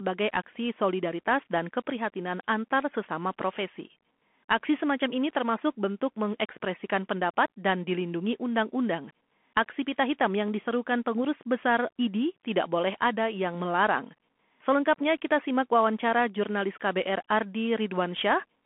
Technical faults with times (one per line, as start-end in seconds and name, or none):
0.00-18.66 Bluetooth CVSD headset codec